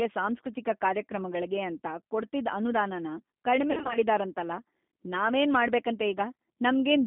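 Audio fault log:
throughout G.729 codec: the speech sounds narrow, slightly rough and synthetic, with nothing above about 3.6 kHz and little below 200 Hz. The coarseness comes from a low-rate coder that rebuilds each 10 ms frame from a vocal tract filter, a pitch predictor and a few pulses rather than the waveform itself. The audible damage fits the 8 kbit/s G.729A variant carried over a telephone-band line.
3.71–3.98 s VoIP packet loss concealed by the speech codec: the voice briefly turns smeared, stretching into a buzzy tone or coloured noise that fades, and stays weak or distorted for a moment after clean sound resumes. About 140 ms of audio went missing, scattered across a 240 ms stretch with the longest gap around 60 ms, which fits roughly seven 20 ms packets. The decoder filled each gap by repeating its last pitch and filter at falling gain.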